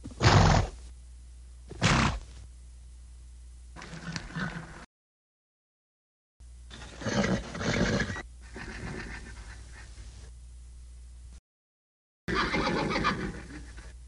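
The player likely ran short of data, causing a playback stall: the sound cuts to silence from 4.85 to 6.40 s, then again from 11.38 to 12.28 s, before resuming.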